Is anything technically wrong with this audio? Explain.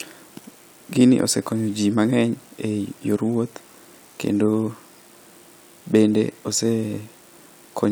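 No, nothing stood out as technically wrong when listening to this speech recording.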